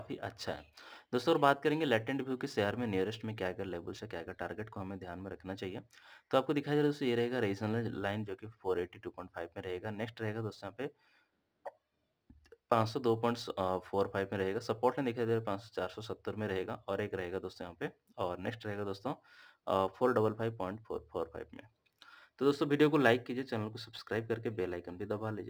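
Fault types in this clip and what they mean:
Crude rate conversion: The sample rate was lowered by picking the nearest existing sample for each new one instead of filtering and resampling properly, which fits a step from 48 kHz down to 44.1 kHz. Samples are dropped in a repeating pattern set by that ratio, so the error forms shifted, inharmonic copies of the sound itself. Throughout the clip this is a gritty, inharmonic fizz riding roughly 30 dB under the signal, strongest on loud and bright passages.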